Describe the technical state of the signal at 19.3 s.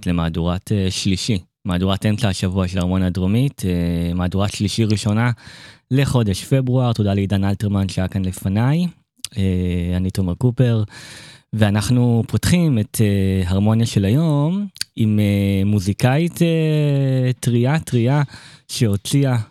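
The speech at 19.3 s is intact, with no fault in the signal at that moment.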